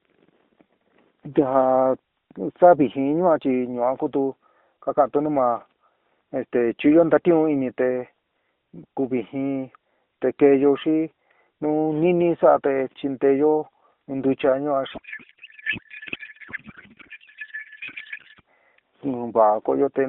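Speech carried over narrowband AMR shows a codec payload misread from 14.94 to 18.41 s: octet-aligned AMR frames decoded as bandwidth-efficient turn the speech into garbled warbling noise, appearing on a spectrogram as smeared, unstructured energy below 4 kHz with no harmonic striations.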